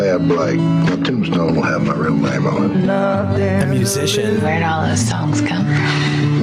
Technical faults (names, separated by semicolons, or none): gain pumping